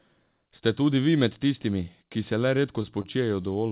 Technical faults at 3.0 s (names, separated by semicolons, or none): short stall from a late packet